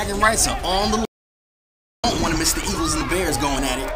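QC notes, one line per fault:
1.05–2.04 s, audio dropout to silence: the sound cuts off abruptly and returns mid-flow after about 0.98 s. The gap is silent, with no room tone at all. Whatever was playing then is lost. The likely cause is a brief loss of input.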